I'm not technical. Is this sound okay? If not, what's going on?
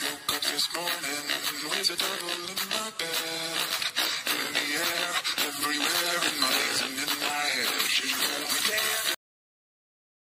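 No: there is a cut-off end at 9.14 seconds. The last part of the recording never got saved or played, so the sound stops abruptly mid-way instead of fading out, and everything after that point, to the end, is complete silence.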